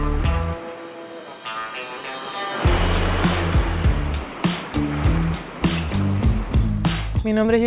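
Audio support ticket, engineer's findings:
Probable clock-matching resampler, likely a drift correction step: playback rate dropped about 5.2% in one jump, 6.69–7.45 s. Speed and pitch fall together by about 93 cents, nearly a semitone flat, then snap back to normal rate.

Call path: band limit at 4 kHz with coding noise, consistent with G.711 mu-law at 64 kbps.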